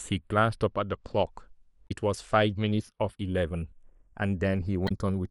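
Throughout the speech, the channels are drifting apart. The two sides run on separate clocks, off by roughly 50 parts per million. The delay between them creeps up to about a fifth of a millisecond. Summed to mono, moving comb notches give a slow flanging.

From 1.84 to 1.91 s, and again from 4.85 to 4.91 s, there is damaged data in the compressed stream. Corrupt frames make the decoder lose sync and hunt for the next header. Each spot is a brief glitch in the sound.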